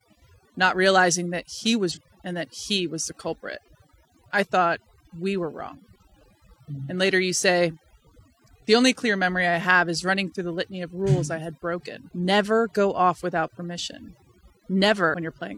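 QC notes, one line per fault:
Throughout: overdone noise removal. Frequency bands near the noise level are pushed almost silent. The background has twinkling specks.
1.91–1.98 s, 12.08–12.13 s, 15.10–15.14 s: damaged data in a compressed stream. The first falls between "not realizing that he" and "and that he was", the second just after "had broken". Corrupted frames make the decoder lose sync, which produces brief blips.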